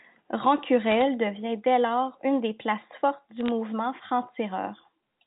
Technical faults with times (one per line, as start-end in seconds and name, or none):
0.91-1.02 bit errors on a digital phone line
3.37-3.48 bit errors on a digital phone line